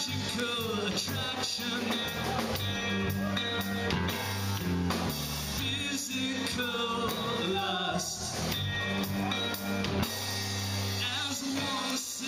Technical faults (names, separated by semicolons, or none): bit error spike